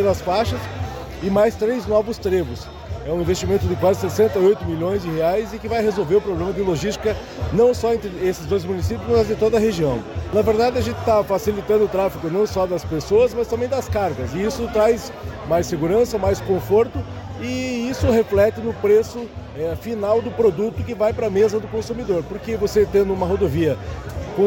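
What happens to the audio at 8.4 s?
Nothing goes wrong at 8.4 s; the audio plays through that moment intact, with no dropout, click, glitch or other fault.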